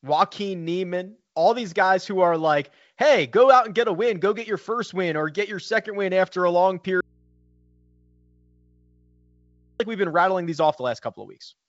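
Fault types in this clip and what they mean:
Audio dropout to a faint residue: the wanted signal was likely lost upstream while the path after the break stayed live, so after "win after a long" the speech cuts abruptly to a low mains hum far below its level, for about 2.8 s, until "we've been rattling these".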